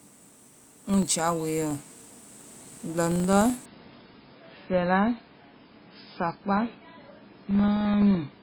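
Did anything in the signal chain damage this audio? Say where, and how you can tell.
Yes. A filter in the driver or buffer stage is restarted on every block: it drops its stored state and begins each block from silence. That leaves a small transient at every block start, heard through the whole speech clip as a buzz at 23.4 Hz. That rate fits a 2048-sample block. The buzz rises and falls with the speech level, which marks it as a processing fault rather than hum picked up in wiring.

The second fault is in the network and codec stage: an adaptive stream switched to a lower bitrate. From 3.66 s to the end, the treble cuts off abruptly, with nothing above 5.3 kHz, and codec artefacts thicken, which points to a drop from about 128 kbit/s MP3 to about 16 kbit/s. The quality change is sudden, with no gap in the audio.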